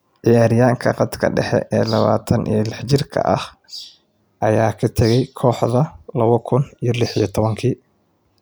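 Speech, with no technical faults audible anywhere.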